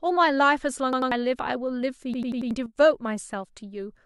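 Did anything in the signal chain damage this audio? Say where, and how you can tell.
Yes. At the driver or buffer stage there's a repeated buffer: a roughly 93 ms chunk stutters from 0.93 to 1.12 s (two extra plays) and again from 2.14 to 2.51 s (four), consistent with a 4096-sample buffer.

There's also a sudden gain jump from 2.66 to 2.76 s. Sound and background drop together by about 10 dB, likely a digital gain step applied with no ramp.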